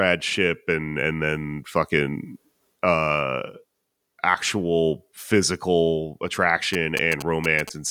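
GSM signalling bursts appear from 6.74 to 7.70 s, just after "actual physical". A nearby 2G phone is sending short groups of radio bursts while signalling to its network rather than carrying a call, and the audio circuit rectifies that RF energy into the signal path. The result is a galloping dit-dit-dit of brief buzzes pulsing at 216.7 Hz, sitting roughly 10 dB below the speech.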